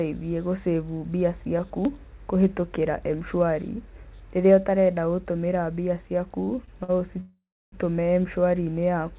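Just after "mbia ciaku", three short stalls from late packets hit at 6.44–6.49 s, 6.65–6.69 s and 6.83–6.90 s. Each time the jitter buffer emptied and the last sound was stretched for 32, 22 and 50 ms before resuming where it stopped. Each holds a sound with a faint buzz. On a spectrogram, the harmonics run flat and smeared for that span; the waveform shows a short, repeating, slightly dipping stretch.

From 7.20 to 7.74 s comes a call audio freeze. The audio holds a fading buzz, then falls silent for about 0.31 s of the 0.52 s gap before continuing with nothing lost. The likely cause is packets held up in transit. The spectrogram shows a decaying smear, then a blank band, all below the 4 kHz ceiling of the call path, which fits a 64 kbps G.711-type codec.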